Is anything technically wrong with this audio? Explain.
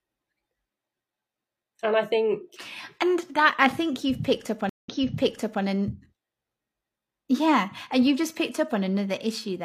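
Yes. A stream reconnect occurs from 4.69 to 5.63 s, just after "think you've picked up". The connection dropped and the player restarted decoding mid-stream: there is about 148 ms of silence, then the audio resumes roughly 0.79 s earlier, so that stretch of speech is heard again.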